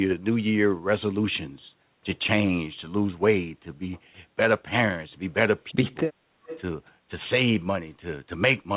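Between 5.71 and 6.12 s the voice sinks by up to about 35 dB in patches, roughly a fifth of a second in all. This is speech suppressed in double talk, likely caused by the echo canceller turning everything down while both sides spoke.

From 6.45 to 6.61 s a faint copy of the voice returns 325 ms late, around 15 dB below the speech. This is an echo leak, likely from a loudspeaker-side canceller letting some of its microphone pickup through. It differs from room reverberation as a separate delayed repeat, not a smooth decaying tail, and like the rest of the call it carries nothing above 4 kHz.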